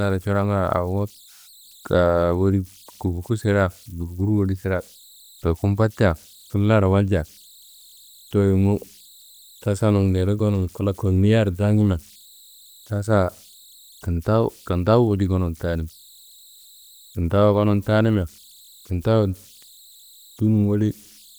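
Converter idle tones run throughout: a faint whistle near 4 kHz, about 31 dB below the speech, shows on a spectrogram as a thin horizontal line persisting through pauses.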